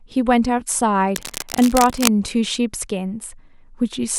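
From 1.08 to 2.08 s, cable scratch noise sits over the speech for about a second: dense, irregular bursts of scratchy rustling, roughly 10 dB below the speech. The likely cause is a worn cable, connector or control being moved, so its contact resistance fluctuates rapidly. Unlike steady hiss, the noise is uneven and comes and goes within that second. Unlike isolated digital clicks, the bursts crowd together into a continuous crackle.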